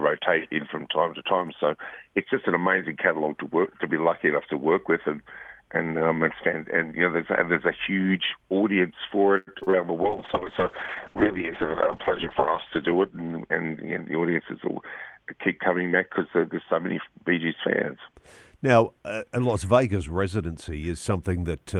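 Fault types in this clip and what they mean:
Repeated packet loss (robotic sound): From 9.37 to 9.74 s the sound turns choppy, broken by short holes up to 95 ms long. Audio kept going missing, and each hole was patched by extending the last sound, which covers nearly half of that stretch.
Call bitrate drop: From 10.03 to 18.22 s the sound grows rough, watery and duller, and its top end falls from 12 kHz to 8 kHz. The encoder was forced down to a far lower bitrate, which fits something near 6 kbps at its worst, held for about 2.3 s.
Jitter buffer speed-up: From 13.22 to 14.12 s the audio hurries along at about 109% speed while keeping its pitch. The receiver had more audio queued than it wanted, so it trimmed short pitch-period slices, roughly a tenth of a second altogether, to cut the delay.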